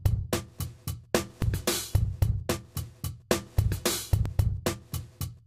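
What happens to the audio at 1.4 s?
A dropped buffer (overrun) occurs at 1.42 s. You hear a sudden jump in the sound and no gap of silence. The likely cause is that the recording software fell behind and the audio hardware overwrote a block of samples before they were read. Roughly 20 ms of material is missing, and the audio on either side is joined directly, which produces the abrupt discontinuity.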